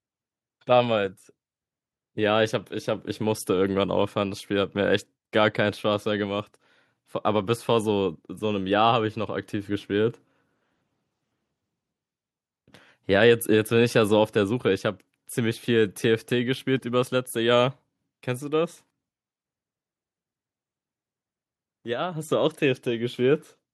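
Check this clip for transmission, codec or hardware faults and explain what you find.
No transmission, codec or hardware fault turns up anywhere in this speech recording.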